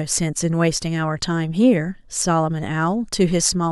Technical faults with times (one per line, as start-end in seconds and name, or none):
2.21 damaged data in a compressed stream